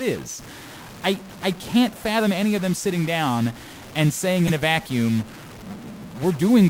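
A single data bit in the sample path is likely stuck at a fixed value throughout the clip, likely from a broken data line or converter fault. About half the samples come out offset by that bit's weight, following the shape of the waveform, so the speech carries added noise and distortion from start to finish. Because the stuck bit also flips with the sign of small values, the pauses between phrases fill with a steady hiss instead of falling silent.

From 4.47 to 4.50 s, just after "sitting down and saying" and before "a vacuum", the decoder played a compressed frame whose bits had been flipped, and the damage fits a single corrupted frame. Misread codes and gains put energy at frequencies where none belonged for that frame's duration. It comes through as a short glitch, peaking at around -10 dBFS, that cuts across the speech.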